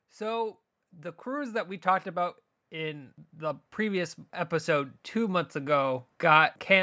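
From 0.18 s to 6.78 s the whole speech track, voice and background alike, swells steadily louder by about 10 dB. This is automatic gain rising: the gain control judged the input too quiet and kept raising its gain across nearly the entire clip, through the call microphone processing.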